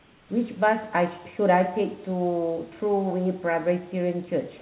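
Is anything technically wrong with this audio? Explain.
Yes. Comfort noise replaces the background from 0.0 to 0.29 s. The opening pause is a steady, featureless hiss, about 3 dB quieter than the room noise after it. The likely cause is the sender pausing transmission during silence while the receiver synthesised roughly matched noise.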